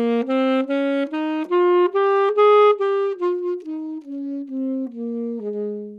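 A Bluetooth SBC bit pool drop runs from 1.94 to 3.61 s. The congested link forced the encoder to spend far fewer bits, which points to a bit pool falling from around 31 to 14. The top sub-bands starve, so the treble goes dull and gritty quantisation noise rises until the rate recovers.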